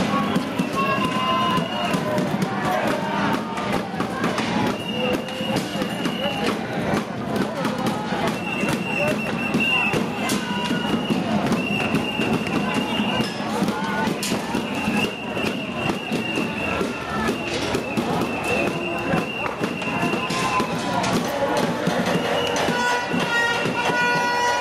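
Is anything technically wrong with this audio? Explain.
Yes, there's gain pumping running the whole way through this recording of sounds. The level keeps rising and ducking by something like 10 dB, pulled down whenever something loud comes in and creeping back up once it passes, so loud and soft moments sit closer together than they should and everything feels squashed. The likely cause is the input gain set far too high for the mic, with a fast limiter or compressor clamping down on each loud sound.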